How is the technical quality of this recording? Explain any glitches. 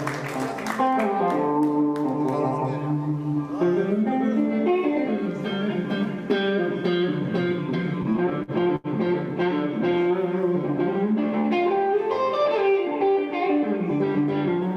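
The recording has one clear glitch: repeated stalls (stutter) between 8.03 and 8.87 s. Packets reached the receiver late or too slowly, so its jitter buffer ran dry six times in under a second. Each time, the receiver stretched the last bit of sound to cover the wait, about 172 ms in all, with the longest gap near 82 ms. Nothing is lost, but roughly a fifth of that stretch is filler, so the audio drags and stutters.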